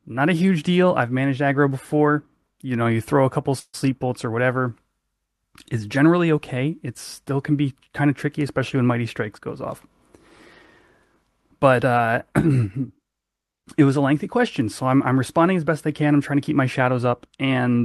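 From 3.59 to 3.87 s, after "you throw a couple", a call audio freeze: delayed packets likely emptied the jitter buffer, so the sound smears into a fading buzz, then briefly goes silent.

From 16.80 to 17.79 s, after "trying to keep my", a jitter buffer speed-up drops short pitch-period slices to cut excess delay, so the audio runs 7% faster at unchanged pitch and sounds hurried.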